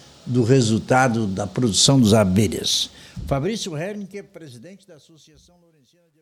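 From about 2.83 s to the end, the fade-out (starting around 2.8 s) shows truncation distortion on a fade. The level stage drops low bits without dither, which fits about 12-bit resolution. From 4.87 s the tail turns gritty and stepped.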